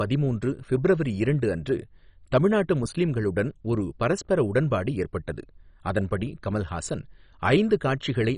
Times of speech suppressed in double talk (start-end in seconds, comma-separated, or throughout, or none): none